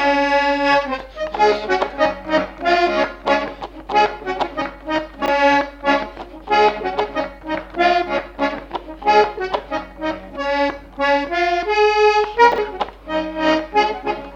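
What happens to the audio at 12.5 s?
A brief jumbled stutter, from 12.52 to 12.58 s: chunks out of order. One 20 ms chunk arrives two chunks late and plays after the two that should follow it. Nothing is lost, but the reordering leaves three hard joins.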